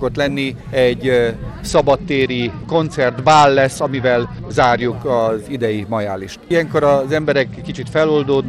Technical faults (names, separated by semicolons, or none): Bluetooth SBC bit pool drop